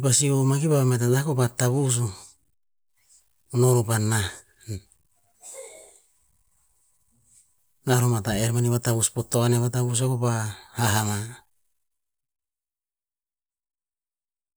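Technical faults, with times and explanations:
No technical faults detected in this speech recording.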